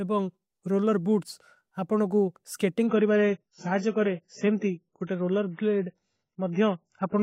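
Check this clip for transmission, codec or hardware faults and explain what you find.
There's one fault, an adaptive stream at a lower bitrate. From 2.87 s to the end, the player switched to a much lower-bitrate version, likely because the connection slowed. The speech turns dull, with nothing above about 7.6 kHz and more codec artefacts, which fits a drop to roughly 16 kbit/s. The change is sudden, with no gap.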